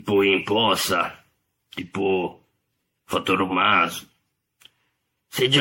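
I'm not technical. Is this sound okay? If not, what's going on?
No. The speech sounds swirly, smeared and hollow for the whole clip, and the starts of sounds are blurred. This is generation loss, likely from being squeezed and saved as an MP3 about fifteen times, with small errors piling up each time.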